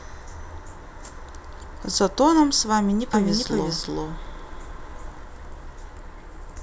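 A doubled audio track runs from 3.13 s to 5.23 s: the speech is joined by an identical copy trailing roughly 0.4 s behind at about equal loudness, with no decay or room colour, switching on and off abruptly, likely from a second, slower capture path mixed in.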